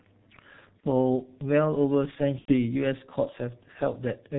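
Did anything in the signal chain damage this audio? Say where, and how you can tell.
Yes, at the codec stage: the G.723.1 codec muffles everything, with nothing above 4 kHz, a hoarse texture and smeared consonants, which fits a roughly 6 kbit/s setting.

There's also network-stage VoIP packet loss concealed by the speech codec at 0.80–0.88 s and 2.39–2.54 s, where the audio is stretched into a buzzy tone or coloured noise that fades as the decoder extrapolates.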